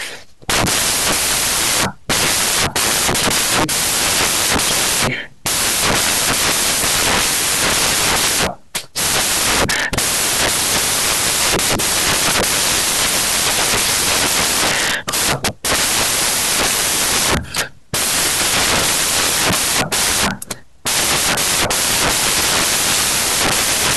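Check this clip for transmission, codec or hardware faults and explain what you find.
The whole clip suffers from samples built from the wrong bytes. Throughout, the reader assembles each sample's bytes in the wrong order or alignment, so rapidly changing low bits land in the most significant positions. The speech is buried under loud, harsh broadband noise, close to white on the louder passages.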